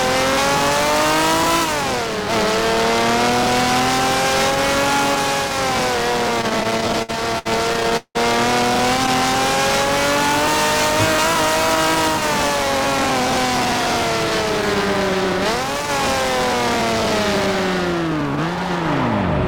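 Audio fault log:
6.41–8.17 s, repeated stalls (stutter): the sound drags and stutters, holding up to 182 ms at a time as late packets repeatedly emptied the jitter buffer and the last sound was stretched.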